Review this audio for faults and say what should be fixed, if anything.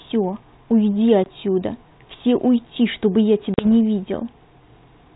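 Packet loss on an ADPCM call cuts two hard-edged silent holes: a 20 ms gap at 1.24 to 1.28 s, about one packet, and a 40 ms gap starting at 3.54 s, about two packets, with the disturbance lasting to 3.71 s. While the packets were missing, the decoder's adaptive predictor and step size drifted from the sender's. The speech after each hole comes back slightly distorted before settling. That recovery smear is what separates it from a plain dropout or a gate closing, where the audio resumes cleanly. Adding packet loss concealment and resetting or resynchronising the ADPCM decoder state after a gap, along with a jitter buffer that absorbs late packets, would prevent it.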